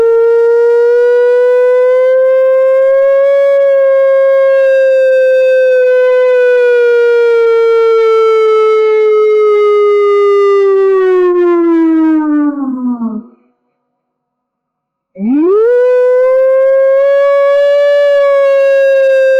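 No technical faults are audible.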